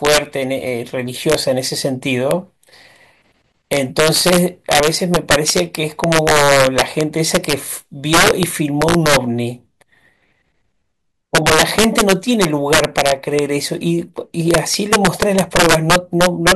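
Throughout the speech, integer overflow breaks up the loudest moments: the signal runs about 5 dB hotter than the integer range allows, and instead of being held at the limit, each peak wraps to the opposite sign. Only around one percent of samples go over, yet each one produces a violent crack far harsher than clipping. On the waveform, peaks snap from top to bottom rail; a spectrogram shows bright full-height vertical streaks.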